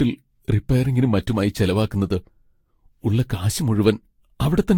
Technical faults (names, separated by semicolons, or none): generation loss